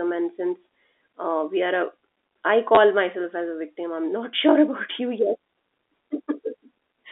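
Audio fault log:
2.75–2.77 s packet loss with last packet repeated: a 20 ms gap filled by replaying audio, fitting two 10 ms packets, giving a brief stutter rather than a silent dropout.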